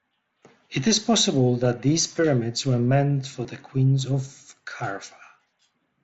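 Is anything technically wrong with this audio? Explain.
Yes, there's concealed Bluetooth headset packet loss, three isolated hits at about 1.65 s (between "is possible" and "these pyramids were meant"), 3.44 s (right after "pyramids were meant for") and 4.79 s. Each gap is about 7.5 ms, which fits one dropped packet on the headset link. The phone filled each hole by copying the best-matching recent stretch of waveform, so each one is nearly hidden in the wideband mSBC audio, easy to miss.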